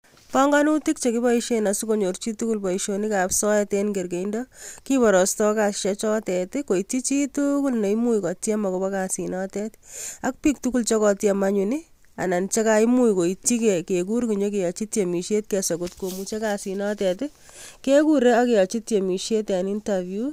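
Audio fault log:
No audible faults detected.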